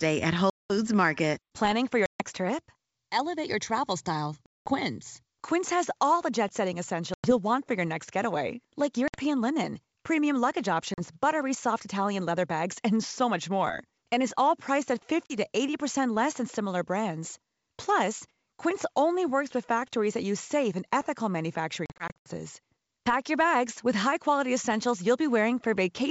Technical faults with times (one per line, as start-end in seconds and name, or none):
0.50-0.76 packet loss on an ADPCM call
2.06-2.21 packet loss on an ADPCM call
4.46-4.74 packet loss on an ADPCM call
7.14-7.32 packet loss on an ADPCM call
9.08-9.17 packet loss on an ADPCM call
10.94-11.01 packet loss on an ADPCM call
15.26-15.34 packet loss on an ADPCM call
21.86-22.30 packet loss on an ADPCM call